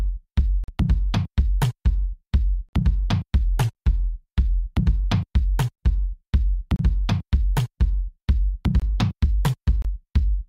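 Right at 0.64 s there's a gap between stream segments: a hard-edged hole of about 44 ms where the sound simply drops to silence. Two segments' timestamps didn't butt up, and the player padded the difference with nothing. It happens again at 2.69 s (43 ms). All the gaps land on one-second segment boundaries, so they come back with a steady rhythm. Nothing is missing from the sound; it's just pushed later.

From 3.37 to 4.61 s everything runs about 6% slow and sits roughly 111 cents flat, a bit over a semitone, before snapping back to normal. That's most likely a drift correction step, where clock-matching software changed the playback rate in one jump to rebalance its buffer, dragging speed and pitch down together.

More gaps follow at 6.76 s (31 ms), 8.80 s (22 ms) and 9.82 s (27 ms). These are shorter than the first two but still read as clean, abrupt dropouts.

Starting at 8.46 s what is likely the opposite step kicks in and holds to the end. 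Playback runs about 6% fast and sits about 104 cents sharp, so the last couple of seconds sound rushed and detuned upward.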